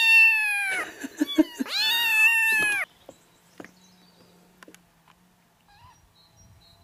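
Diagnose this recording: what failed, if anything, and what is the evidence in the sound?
Nothing stood out on listening that would point to a failure at any stage of the chain.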